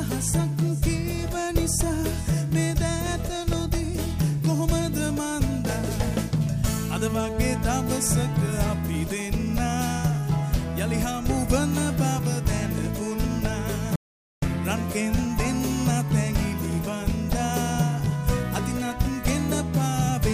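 From 13.96 to 14.42 s an audio dropout to silence cuts the sound mid-flow for about 465 ms. Unlike a quiet pause, no room tone remains. The likely cause is lost input.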